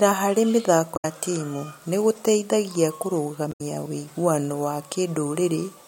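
At 0.93 s the speech breaks up in a short glitch that lasts until 1.05 s. This is damaged data in a compressed stream. Bytes in the encoded file were lost or corrupted there. The decoder misreads those frames, loses sync and hunts for the next valid frame header. The same fault returns from 3.49 s to 3.61 s. Each burst lasts about 0.12 s and is heard as a brief chirp or blip cutting through the speech.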